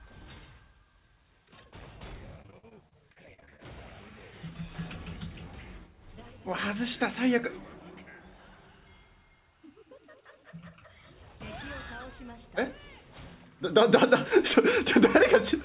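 From 2.42 to 3.60 s, repeated packet loss strikes. About a dozen short holes, the longest 46 ms, are patched by stretching prior sound, giving choppy, robotic audio. The call path's G.711 mu-law codec leaves nothing above 4 kHz.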